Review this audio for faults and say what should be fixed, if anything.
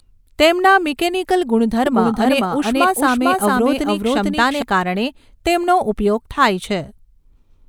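A doubled audio track runs from 1.86 s to 4.62 s. A full-band copy of the speech trails about half a second behind, at roughly equal level. It has no decay and cuts in and out abruptly. A second, slower capture path is likely to blame. Route each source through one capture path only.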